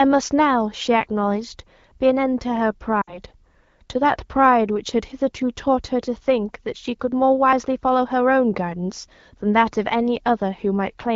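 At 3.01 to 3.19 s the speech smears and sags: lost AMR speech frames. About 60 ms of data, which fits three 20 ms frames, failed on the radio link. The wideband decoder, otherwise giving clear HD Voice, stretched the last sound with falling gain. It is a quick fade to near silence rather than a clean cut, and the voice returns briefly weak.

At 7.53 s the sound jumps abruptly, with no fade or smear, as a very short piece of roughly 20 ms vanishes and the two sides butt together. This is audio missing between chunks, likely from recording in 4 s blocks and dropping audio at the handover.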